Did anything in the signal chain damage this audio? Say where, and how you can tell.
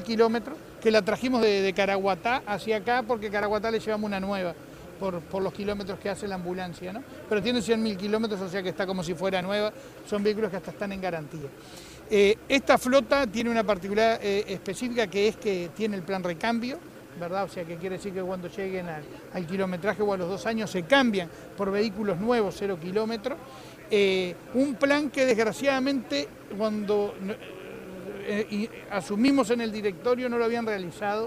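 Yes. At the driver or USB stage, periodic USB or driver dropouts occur: something stalls the audio stream about every 1.99 s, from 1.43 s to 29.28 s. Each time, roughly 10 ms of audio is skipped outright, leaving evenly spaced ticks wherever sound is present.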